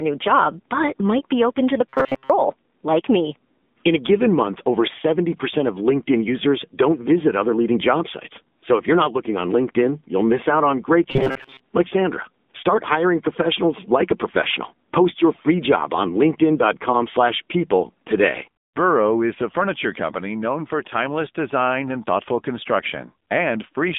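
Throughout the speech, the signal has passed through the AMR narrowband mobile codec, and its buzzy, synthetic coarseness fits a low bitrate near 7.4 kbps. The band runs from about 200 Hz to 3.6 kHz, and nothing is left above 3.7 kHz, so the sound is dull, boxy and plainly coded.

From 1.89 to 2.31 s and again from 11.11 to 11.61 s, the audio turns into a rigid, metallic drone at 133 Hz. This is robotic sound from repeated short buffers. Fresh audio was likely arriving too late, so the player looped a slice of roughly 7.5 ms and most of the real signal was dropped. The speech still follows its shape, but it sits on that fixed buzz.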